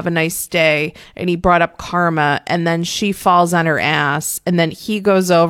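No technical faults are audible anywhere in this speech recording.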